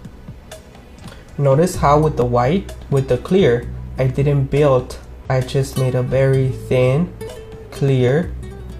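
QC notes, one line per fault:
0.98–1.03 s, damaged data in a compressed stream: a stretch of the coded bitstream arrives corrupted, so the decoder cannot parse those frames, loses frame sync and hunts forward for the next valid header. The result is a brief burst of garbled output lasting about 50 ms.
1.81–3.03 s, CD scratch ticks: a blemish on the disc wipes out more data than error correction can rebuild on each rotation, so the player conceals or mutes the damaged samples once per turn. Seven short ticks, each a few milliseconds at most, fall at a steady rate of roughly six per second.
5.25–5.30 s, damaged data in a compressed stream: a second corrupted section forces the decoder to discard frames and resynchronise. It is heard as a short disturbance of about 45 ms.
7.07–8.29 s, CD scratch ticks: the same disc defect recurs once per revolution with concealment failing each pass. Seven regularly spaced ticks of a few milliseconds recur at about six per second.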